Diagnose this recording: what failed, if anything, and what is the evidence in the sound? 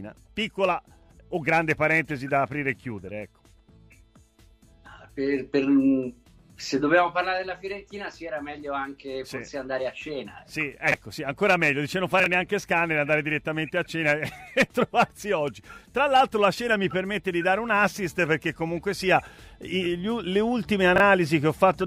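Three brief jumbled stutters occur at 10.88–10.94 s, 12.2–12.26 s and 20.96–21.0 s. These are chunks out of order in the buffer stage: a block, consistent with 20 ms chunks, plays one or two chunks late, leaving three hard joins each time.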